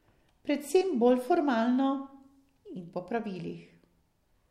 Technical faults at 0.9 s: none

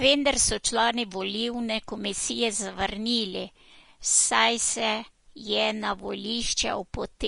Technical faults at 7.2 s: Vorbis compression

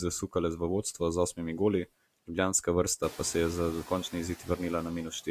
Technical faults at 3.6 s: noise suppressor artifacts

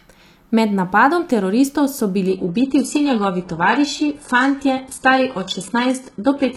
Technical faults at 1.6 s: none

